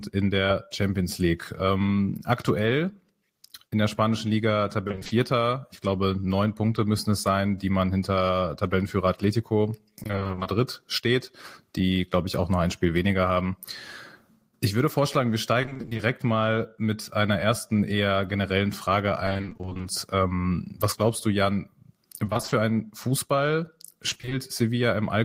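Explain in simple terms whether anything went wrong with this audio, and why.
Six short bursts of repeated packet loss (robotic sound) break up this speech, at 4.87–5.11 s, 9.99–10.47 s (just before "steht die glaube ich"), 15.61–16.01 s (between "würde vorschlagen wir" and "mal mit einer ersten"), 19.25–19.85 s (just before "ähm was glaubst du"), 22.25–22.53 s and 24.09–24.33 s. In each stretch, pieces of sound 20 ms long went missing over and over, and each hole was patched by repeating what came just before. Half of each stretch is patched sound, which makes it choppy and machine-like.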